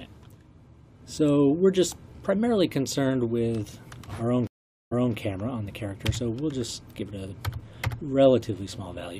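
A stream reconnect occurs from 4.47 to 5.14 s. The connection dropped, leaving about 0.44 s of silence, and a fresh decoder then picked up mid-stream. Because the server resent recent data, playback resumes 0.23 s earlier, briefly repeating audio already heard.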